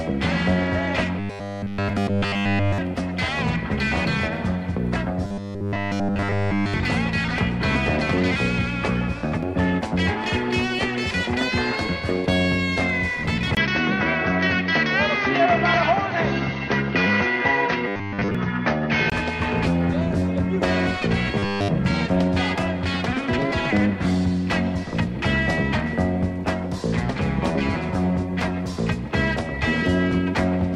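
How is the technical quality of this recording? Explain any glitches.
The recording has two kinds of glitch: a robotic buzz that returns four times, and a stretch where the sound turns duller.

Robotic sound from repeated short buffers occurs at 1.19 to 2.78 s, 5.25 to 6.74 s, 17.88 to 18.35 s and 21.38 to 21.68 s. A rigid 100 Hz buzz replaces the sound. The likely cause is one 10 ms chunk looping while fresh audio is skipped. Most of the 17.88 s stretch buzzes, the rest entirely.

An input switched to a poorer device runs from 13.55 to 19.12 s. A 20 ms silence marks the switch. The sound then narrows in band and turns dull. A faint new noise floor appears, while the level stays about the same. The likely cause is a lower-quality microphone taking over.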